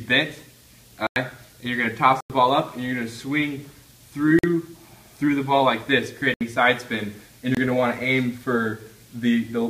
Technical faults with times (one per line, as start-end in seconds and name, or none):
1.07-1.16 block of digital silence
2.21-2.30 block of digital silence
4.39-4.43 block of digital silence
6.34-6.41 block of digital silence
7.55-7.57 block of digital silence